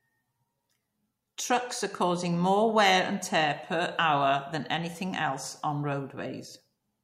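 No technical faults can be heard in this speech recording. There is nothing in the audio that calls for a time or a value to be noted.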